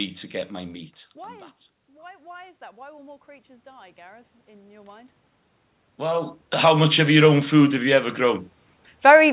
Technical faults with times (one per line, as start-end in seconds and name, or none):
1.15-5.18 automatic gain rising
5.98-8.48 automatic gain rising